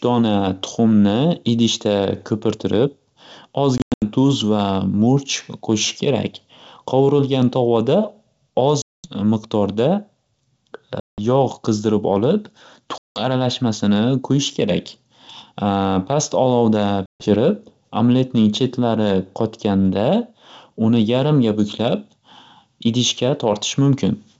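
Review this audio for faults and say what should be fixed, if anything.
Packet loss on an ADPCM call hits at 3.78–4.03 s (before "duz va"), 8.82–9.12, 11.00–11.19, 12.98–13.22 and 17.06–17.27 s. Each one leaves a hard silent gap, then slightly distorted speech while the decoder's predictor recovers. Adding jitter buffering and loss concealment on the network path, or FEC, would fix it.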